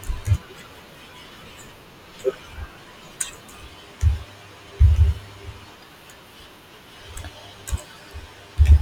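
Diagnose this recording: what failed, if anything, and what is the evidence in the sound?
Hard clipping appears near the end of the speech, from 8.71 to 8.73 s, as a brief crackle on a peak. A stage with a fixed full-scale limit, such as a converter or sample-format conversion, was overdriven by about 2 dB and sliced the waveform flat. The edge is abrupt and bright, unlike the rounded thickening of soft saturation.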